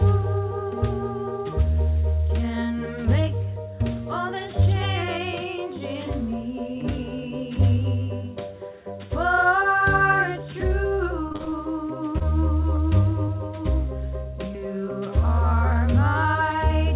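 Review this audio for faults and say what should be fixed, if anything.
Repeated packet loss (robotic sound) runs from 11.28 to 11.54 s. Six separate holes open up in that quarter second, the longest about 37 ms, and the receiver patches each one by stretching the sound just before it. Nearly half the stretch is synthetic fill, so the audio turns choppy, with fragments missing between the patches. Preventing it means giving the call a more stable network path with enough jitter-buffer headroom, or adding redundancy or FEC, so that bursts of late or lost packets are recovered rather than concealed.

Short concealed packet loss occurs three times, at 12.18, 12.76 and 13.26 s. Each time about 20 ms of audio never arrived, roughly one packet's worth. The decoder bridges it by continuing the preceding waveform, from its pitch where the sound is voiced and as shaped noise where it is not, then fades back into the real signal, leaving a brief smear or wobble. 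The band-limited G.711 sound, with nothing above 4 kHz, runs through the whole clip. Preventing these isolated drops means reducing packet loss on the link or sending redundant audio so a single missing packet can be rebuilt.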